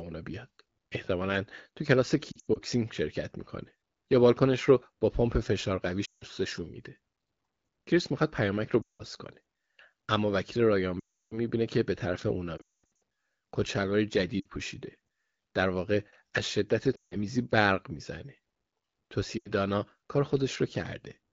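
Lost AMR speech frames break up the speech at 2.32–2.58, 6.05–6.24, 8.82–9.02, 11.00–11.38, 12.57–12.99, 14.40–14.46, 16.95–17.16 and 19.37–19.50 s. The decoder fills each gap by repeating the last good pitch and vocal tract settings at falling gain. Short gaps warble, while the 11.00 and 12.57 s runs drop to near silence within two frames, with a 220 ms stretch at 12.57 s. On a spectrogram, harmonics turn flat and then dim. The waveform envelope shrinks before speech resumes, rough at first, through wideband coding that sounds clean enough to point to 12.65 kbit/s or more.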